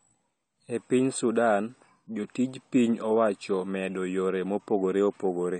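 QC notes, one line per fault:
Throughout, AAC compression: a low-bitrate encode, likely AAC-LC around 32 kbps, removes everything above 9 kHz, leaving speech dull, smeared and plainly damaged.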